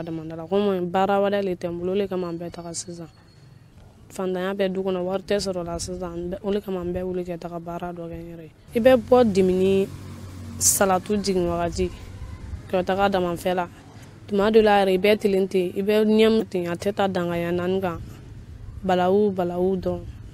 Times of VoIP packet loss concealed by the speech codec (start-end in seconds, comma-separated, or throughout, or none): none